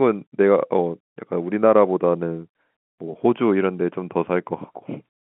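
No technical faults can be heard in this speech, which carries the narrow sound of G.711 telephone coding, with its content held inside a line band of roughly 150 Hz to 3.4 kHz, as expected of a 64 kbps mu-law telephone channel.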